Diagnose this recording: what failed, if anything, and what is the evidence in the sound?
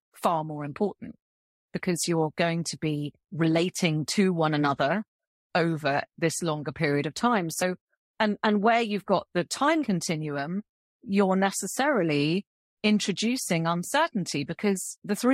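Codec stage: compressed frames skipped. The speech jumps ahead about 50 ms at 7.61 s and about 30 ms at 9.83 to 9.85 s. Whole frames went missing or the decoder rejected them.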